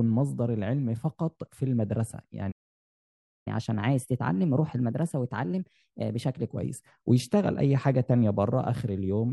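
Speech plays normally until 2.51 s. Then a playback stall cuts it to silence for about 0.94 s. The sound resumes at 3.47 s. The likely cause is the player running out of buffered data or having its thread blocked. From 3.47 s to 6.47 s there is catch-up at higher speed. The player runs its backlog 1.1 times faster to recover lost time. Pitch rises by roughly one and a half semitones. Both settle back to normal at 6.47 s.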